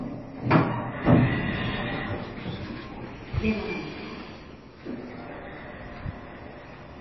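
Throughout the clip, the audio was likely squeezed through heavy MP3 compression, with the encoder starved of bits in a way that points to a very low bitrate, somewhere near 23 kbps. To save data it cut away the treble entirely, leaving nothing above 5.8 kHz, and dropped weaker frequency lines that then flicker in and out from one frame to the next. The result is a dull, muffled top end with a watery, swirling texture, metallic chirps on bright sounds, and smeared attacks.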